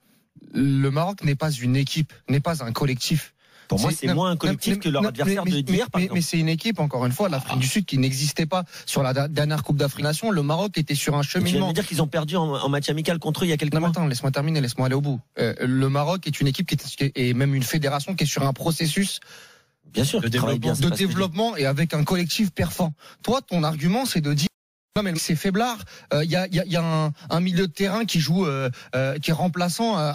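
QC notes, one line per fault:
0.35–0.40 s, 10.01–10.03 s, 22.83–22.87 s, 25.15–25.19 s: compressed frames skipped. The audio jumps ahead by about 200, 150, 200 and 300 ms, which fits whole frames of about 46 ms going unplayed. On a spectrogram, each appears as a point where the texture shifts abruptly.
24.47–24.96 s: audio dropout to silence. The sound cuts out for about 0.49 s and returns mid-flow, most likely because the input was lost while silence kept being written. The waveform is flat, and the spectrogram shows a silent gap with no room tone.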